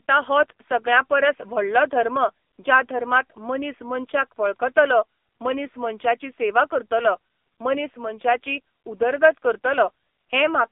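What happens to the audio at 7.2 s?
At 7.2 s, as throughout, the speech passes through the AMR narrowband mobile codec: nothing above 3.6 kHz, thin lows below 250 Hz, and a heavily buzzy, synthetic quality fitting roughly 6.7 kbps.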